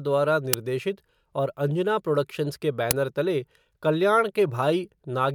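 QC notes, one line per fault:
0.53 s and 2.91 s, uninitialised buffer: two loud cracks, each about 5 ms long, where a buffer played before any audio was written to it, so stale memory contents came out as samples.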